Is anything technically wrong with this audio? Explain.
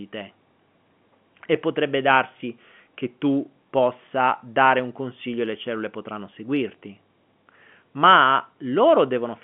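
No, nothing here is actually wrong: the speech simply has the narrow, roughly 150 Hz to 3.4 kHz sound of ordinary G.711 telephone coding, which is how a normal phone line is meant to sound.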